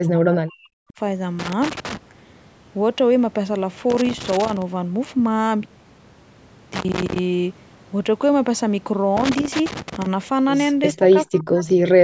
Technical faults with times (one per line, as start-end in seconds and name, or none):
0.00-0.95 speech suppressed in double talk
1.39-1.97 loose connector crackle
6.74-7.19 loose connector crackle
9.17-10.06 loose connector crackle
10.93-12.04 speech suppressed in double talk